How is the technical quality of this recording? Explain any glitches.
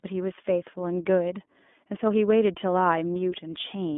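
The quality is limited by one fault throughout: iLBC codec coding. The audio is confined to roughly 200 Hz to 3.5 kHz. Each short frame, consistent with 20 ms frames at 15.2 kbps, is coded independently. The speech therefore sounds clearly rough and synthetic.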